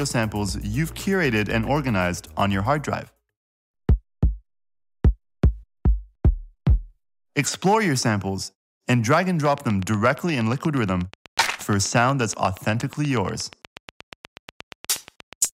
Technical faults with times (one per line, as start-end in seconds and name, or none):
9.45-15.46 train of clicks